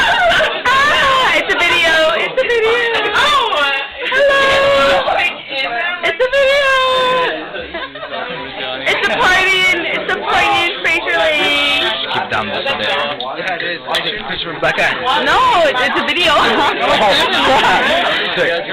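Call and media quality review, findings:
No audible defects found across the recording; nothing to attribute to capture, transport or playback.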